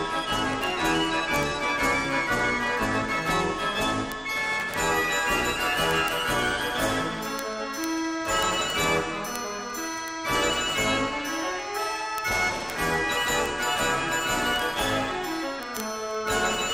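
From 0.12 s to 16.73 s, word clock ticks run through the audio at a steady rate of roughly one every 30 ms. The receiving device's clock is not locked to the sender's, drifting by roughly 700 ppm, so each slip drops or repeats a single sample, heard as a sharp tick.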